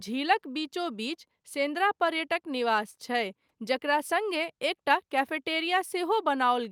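No technical faults can be heard anywhere in the speech recording. Nothing in it calls for a timed entry, so there is no sequence of events to report.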